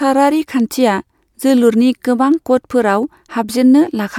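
A short recording of speech, with no technical faults to point to. Nothing in it needs a time or a cause.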